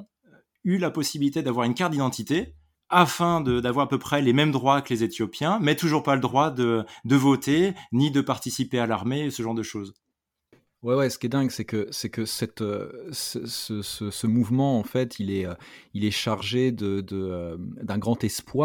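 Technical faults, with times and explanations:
No technical faults can be heard.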